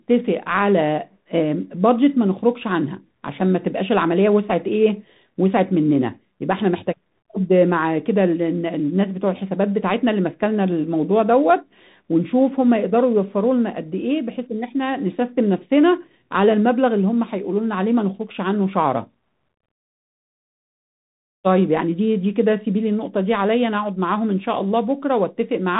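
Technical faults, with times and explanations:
Throughout, Bluetooth CVSD headset codec: the speech stops dead at about 3.8 kHz and carries a constant granular hiss that tracks the level. Sibilants come out scratchy, and loud bright sounds break up where the one-bit up/down steps cannot keep pace, which fits a 64 kbps CVSD stream. Plain telephone-band narrowing would leave the band-limited speech clean. This slope-overload grit and level-following hiss is what sets CVSD apart.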